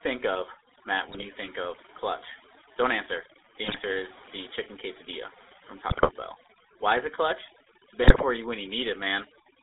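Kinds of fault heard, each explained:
Overdone noise removal: the denoiser was set too hard, so any band it takes for noise gets pulled way down or dropped, and softer parts of the speech go with it. The background drops and breaks up into twinkly specks.
GSM full-rate codec: the old GSM coder models the vocal tract and drives it with sparse, regularly spaced pulses, which gives the voice a buzzy, gravelly roughness the whole way through. The band is squeezed to roughly 300 Hz to 3.7 kHz, so it sounds like a phone call.
GSM bit errors: corrupted bits reach the decoder and scramble the filter, pitch or gain values, so the speech squawks, pops and gargles in four short bursts: 1.08–1.27 s before "think of clutch", 3.64–3.81 s before "is the chicken quesadilla", 5.88–6.10 s, and 8.04–8.23 s before "you when".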